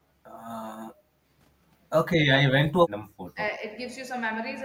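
At 1.07 s the room tone behind the talker sinks abruptly and stays down until 1.23 s, then returns. This is background gated by the echo canceller: while far-end audio was playing through the loudspeaker, the canceller treated the microphone signal as echo and clamped its gain. The deepest drop is about 15 dB, so the ambience dips for roughly a sixth of a second rather than fading smoothly.

From 2.48 to 2.52 s the talker's own speech is briefly pulled down, by around 20 dB at its lowest, leaving a short hole of about 40 ms in the speech. This is speech suppressed in double talk, and the likely cause is that both ends were talking at once. The canceller could not separate near-end speech from loudspeaker echo, so it attenuated everything together.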